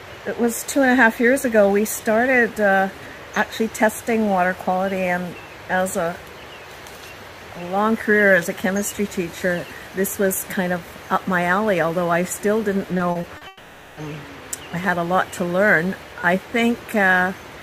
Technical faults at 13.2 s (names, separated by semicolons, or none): repeated packet loss (robotic sound)